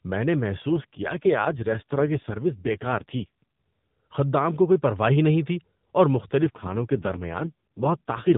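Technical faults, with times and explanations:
0.68–3.55 s and 6.42 s to the end, AMR rate drop: the weakened mobile link forced the AMR narrowband codec far below its usual rate, consistent with a fall from 12.2 to 4.75 kbps. With fewer bits per frame, speech turns rough, buzzy and synthetic, with no gap.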